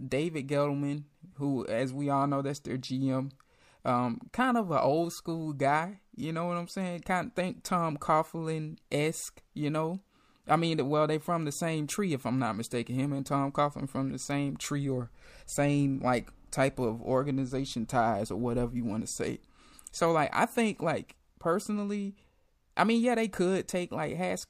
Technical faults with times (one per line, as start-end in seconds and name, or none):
none